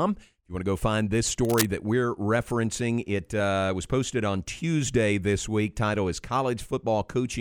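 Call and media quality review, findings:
Cable scratch noise, 1.45 to 1.66 s, after "to go find this", before "that we're referencing it". Likely worn cable or connector moved, contact resistance fluctuating. Dense uneven scratchy burst over the speech, only slightly quieter than it.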